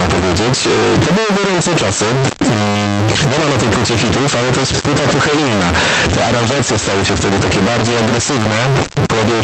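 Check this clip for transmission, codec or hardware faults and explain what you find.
A hardware fault runs through the whole recording: the speech carries a stuck bit from start to finish. One bit of each sample is likely held at a fixed value by a broken data line or converter, so roughly half the samples land off by that bit's weight in a waveform-dependent pattern. Because the error flips with the sign of small values, the pauses fill with constant noise rather than falling silent. The call path is also audible, with Opus at 24 kbps limiting the bandwidth to 8 kHz.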